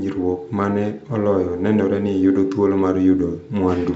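This speech clip has nothing technically wrong with it.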